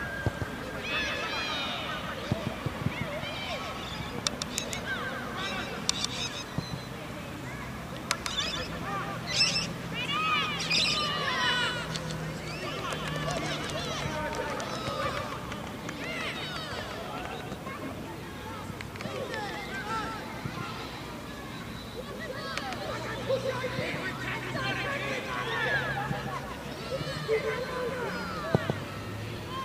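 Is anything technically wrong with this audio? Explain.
Yes. Doubled audio track throughout: a dry full-band copy, about 5 dB quieter, trails by roughly 150 ms, likely a slower second capture path, heard as slapback doubling.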